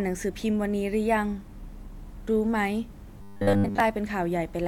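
From 3.18 to 3.80 s the speech turns into robotic sound from repeated short buffers: a rigid, metallic buzz at 100 Hz that still loosely tracks the words. The likely cause is audio arriving too seldom, so a 10 ms slice is looped to fill most of that span while real audio is skipped. A spectrogram shows evenly spaced horizontal harmonics of 100 Hz, and the waveform shows an identical short cycle repeating.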